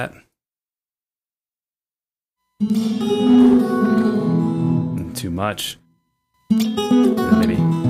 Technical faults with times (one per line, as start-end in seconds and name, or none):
5.67-7.90 time-stretched section